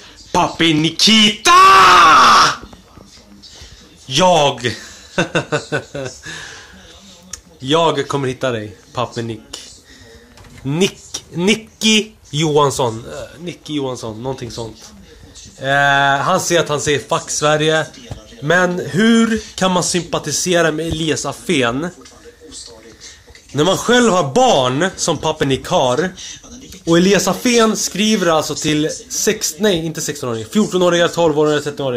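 Dropped buffers, likely from capture overruns, appear at 0.79, 25.43, 28.69 and 30.81 s. Each one is heard as the sound jumping ahead rather than pausing. When the capture side falls behind, a block of samples is overwritten before it is read, and the audio on either side is spliced together. The first skip is only a few milliseconds, the later three roughly 5 to 10 ms.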